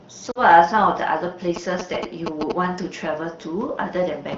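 At 0.31 s there are lost AMR speech frames. Corrupted radio data made the decoder repeat the last good settings with falling gain. About 40 ms drops out, falling to near silence within the two lost frames, until the signal recovers at 0.42 s. From 1.56 to 2.52 s come GSM signalling bursts. A nearby 2G phone's radio pulses are rectified by the audio circuit. The result is a galloping pattern of short 217 Hz buzzes, only about 5 dB below the speech, heard through the clear wideband HD Voice sound.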